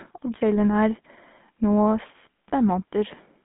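Speech that has passed through the GSM full-rate codec for its whole length, with the plainly audible damage of that scheme. The band is held to roughly 150 Hz to 3.5 kHz, and the sound takes on a buzzy, gravelly roughness. That comes from the codec rebuilding the excitation from a sparse, regular pulse train and keeping only every third sample. The loss of body and treble from band-limiting alone leaves a smooth, dull voice, so the grainy rasp is what points to this codec, at a rate that fits about 13 kbps.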